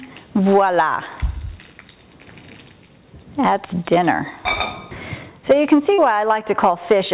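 A call recording, band-limited with nothing above 4 kHz (fitting a G.711 A-law path at 64 kbps), with short concealed packet loss at 5.94 to 6.00 s. About 40 ms never arrived, and the receiver filled the gap by extending the preceding sound. It shows as a brief smeared patch on a spectrogram.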